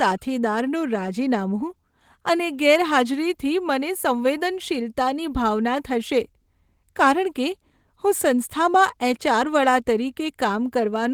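A speech recording with nothing technically wrong to point at anywhere along the way, so there's really nothing to flag here.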